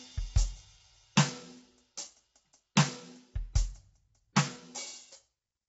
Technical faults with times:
0.00-5.68 low-delay AAC compression

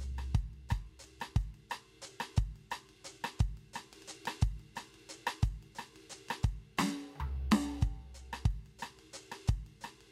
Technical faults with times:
none

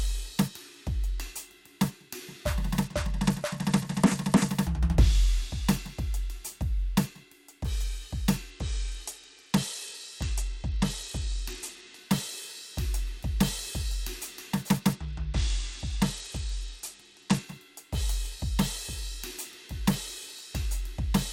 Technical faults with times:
2.84-4.49 Bluetooth SBC bit pool drop
8.50-11.99 Bluetooth SBC bit pool drop
14.93-17.44 Bluetooth SBC bit pool drop

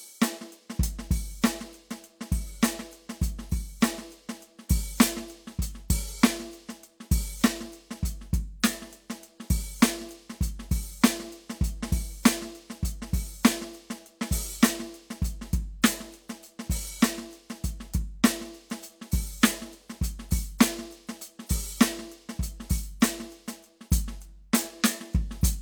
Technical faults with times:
none

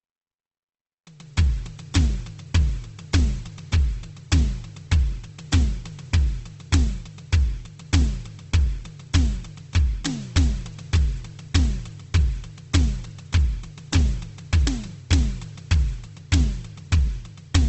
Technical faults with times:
0.00-17.69 Opus compression

